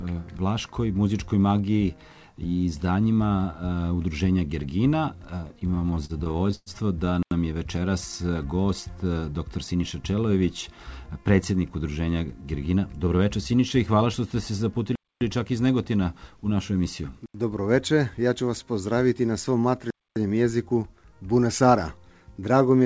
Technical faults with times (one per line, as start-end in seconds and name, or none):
5.57-6.69 repeated stalls (stutter)
7.23-7.31 block of digital silence
9.53-9.83 jitter buffer speed-up
14.95-15.21 block of digital silence
17.26-17.34 block of digital silence
19.90-20.16 block of digital silence
22.38-22.83 jitter buffer speed-up